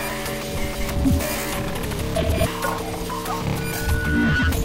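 From 3.56 s to 4.58 s a loudspeaker feedback squeal sets in. A microphone is hearing the speaker it drives, and around 1.5 kHz the loop gain passes unity, so that single frequency feeds on itself. The tone swells over roughly the first three-quarters of a second until it sits about level with the sound. Unlike a steady whine or test tone, it grows by itself from nothing.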